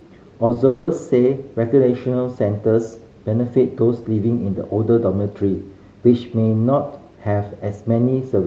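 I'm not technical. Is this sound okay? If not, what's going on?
No. There are two kinds of fault, all early in the speech.

At 0.45 to 0.51 s and again at 0.53 to 0.57 s there is short concealed packet loss. Small bits of the call arrived late, so the receiver patched over them, leaving brief smears.

From 0.67 to 0.89 s the speech turns into a fading, smeared continuation of the previous sound for about a fifth of a second. This is likely a long network dropout, with real audio missing throughout.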